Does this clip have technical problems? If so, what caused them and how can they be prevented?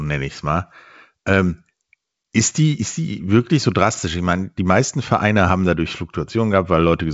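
No, nothing stood out on listening to this speech clip, which has passed through G.722 wideband telephone coding at 64 kbit/s and has no content above about 7.7 kHz.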